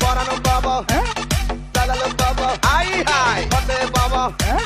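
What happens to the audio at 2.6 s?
Nothing goes wrong at 2.6 s; the audio plays through that moment intact, with no dropout, click, distortion or other fault.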